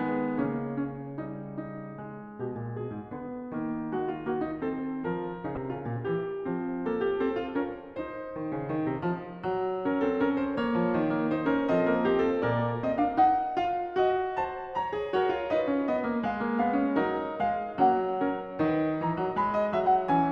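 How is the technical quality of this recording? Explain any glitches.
One glitch breaks into the music. Damaged data in a compressed stream, 5.54 to 5.57 s: corrupted bytes throw the decoder out of sync until it finds the next frame header, producing a brief blip.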